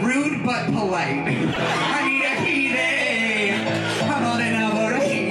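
From 1.50 to 1.57 s the audio skips ahead with a brief glitch. The likely cause is a broken MP3 bit reservoir, with frames fed misaligned data, which fits 26 ms frames.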